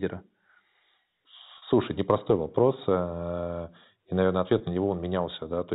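Speech over a G.711 telephone path, where packet loss with pitch repetition fills brief gaps with a held, buzzy repeat of the last pitch period. The 40 ms gap at 1.58–1.62 s fits two lost packets, and the 20 ms gap at 4.58–4.60 s, just after "и наверное", fits one.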